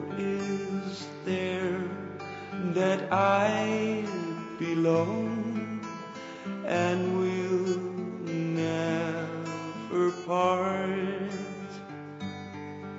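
No technical faults can be heard anywhere in this audio. Nothing breaks, drops out or shifts at any point.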